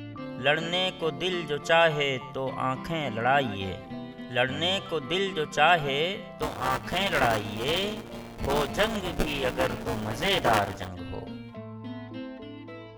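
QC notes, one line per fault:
6.42–10.88 s, buffer tearing: a steady robotic buzz at 200 Hz rides on the sound for the whole stretch. The write and read positions in the ring buffer have slipped and cross once every 5 ms period. Roughly a fifth of each period replays audio from about ten milliseconds earlier, one lap back, with hard joins on both sides. Those repeating splices produce the rattle at the period rate.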